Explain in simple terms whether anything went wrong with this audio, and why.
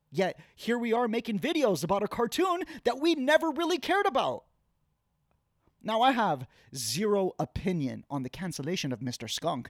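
Nothing went wrong with this recording of speech. Listening closely, there are no faults to point to at any moment, so there is nothing here that needs explaining.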